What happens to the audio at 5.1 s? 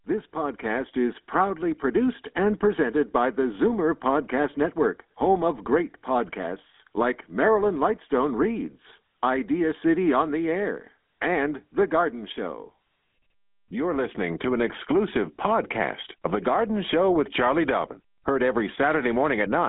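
At 5.1 s you're hearing GSM full-rate codec damage, which runs through the whole clip rather than starting there. The voice is rebuilt from a vocal-tract model driven by sparse regular pulses, giving a plainly buzzy, gravelly roughness, all squeezed into a phone band around 200 Hz to 3.5 kHz with nothing above 3.7 kHz.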